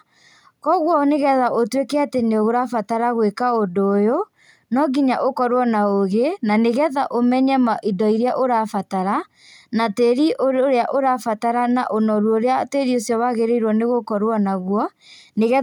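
Nothing in the speech recording stood out as a technical problem on listening.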